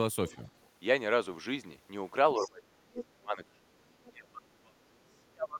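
The echo canceller likely let part of the loudspeaker signal through, so other side's voice leaking through appears from 0.29 to 0.48 s as a faint second voice, roughly 30 dB below the speech. It returns louder from 2.36 to 2.51 s and again from 2.98 to 3.05 s, about 15 to 20 dB down.

In the same stretch, speech suppressed in double talk begins. With both sides active, the canceller likely could not tell its own talker from the echo and pulled the level down. From 2.36 to 3.81 s the voice dips, falling as much as 30 dB. The same thing happens from 4.07 to 4.93 s and from 5.29 s to the end, with drops of about 35 dB.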